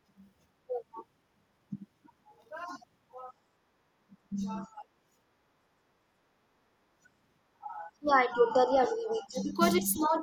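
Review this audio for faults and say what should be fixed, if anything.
The speech level drops in four places: 4.3 to 4.83 s (about 15 dB down), 7.52 to 7.67 s (about 30 dB, nearly cut out), 7.88 to 9.59 s (about 15 dB, over most of that stretch), and 9.81 to 10.18 s (about 10 dB). This is likely speech suppressed in double talk: with both ends talking, the echo canceller could not separate this talker from loudspeaker echo and attenuated both. Prevent it by using an echo canceller with reliable double-talk detection and less aggressive residual-echo suppression.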